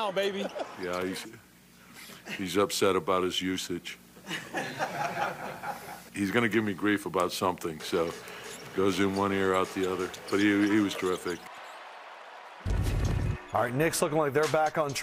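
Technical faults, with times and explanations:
Nothing stood out as a technical problem on listening.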